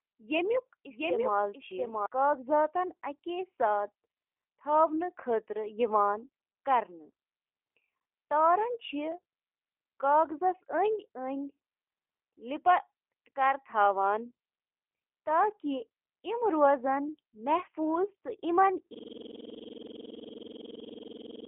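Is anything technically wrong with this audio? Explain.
Yes, three things stand out in this speech clip.

G.729 codec damage runs through the whole clip. The sound is squeezed into a telephone band of roughly 300 Hz to 3.7 kHz, with nothing above 3.8 kHz, and has that slightly rough, synthetic edge you get when a codec rebuilds speech from a vocal-tract filter, a pitch predictor and a few pulses per frame. It fits G.729A at 8 kbit/s, and the damage is plainly audible rather than subtle.

A doubled audio track is already running when the clip starts and stops abruptly at 2.06 s. A second full-band copy trails the original by around 700 ms, about 5 dB quieter, with no decay or room colour, so it sounds like a clean, dry repeat. The likely cause is the same audio being picked up a second time through a slower path and mixed back in.

A system hang loop starts at 18.94 s and runs to the end. 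The same 46.44 ms slice repeats exactly, some 55 times, which puts the repetition at 21.5 Hz and fits a 2048-sample buffer. That's what happens when the machine or driver freezes while the sound hardware keeps replaying its ring buffer. It comes across as a hard, rapid stutter sitting right on the edge of a buzz.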